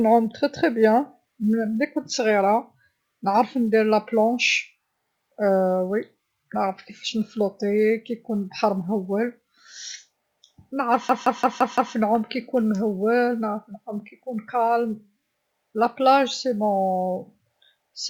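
At 11.09 s the speech hits a system hang loop: the machine stalled while the audio hardware kept replaying one 171 ms chunk, which fits an 8192-sample buffer. It repeats five times at about 5.9 Hz, a machine-gun stutter until 11.95 s, with essentially nothing lost.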